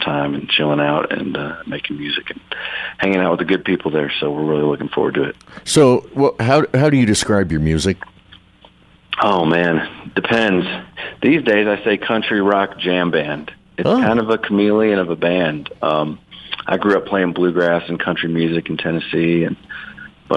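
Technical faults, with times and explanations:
Nothing stood out on listening to the clip.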